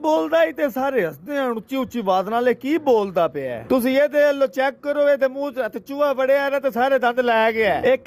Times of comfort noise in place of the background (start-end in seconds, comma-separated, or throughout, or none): none